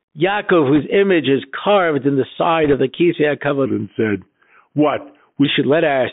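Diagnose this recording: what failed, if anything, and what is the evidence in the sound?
The codec stage ran as a Bluetooth CVSD headset codec throughout, its one-bit delta coding passing only about 150 Hz to 3.7 kHz, leaving scratchy sibilants and granular hiss.

On the radio link, bit errors on the Bluetooth voice link at 0.75–0.81 s, just before "image is carved in", and at 2.64–2.75 s, after "is carved in the", add brief rushing crackle without loud clicks.

At playback, 3.66–5.45 s plays at the wrong speed, about 0.86 times normal. Pitch drops roughly three semitones and the speech drags, likely from a section resampled against the wrong clock.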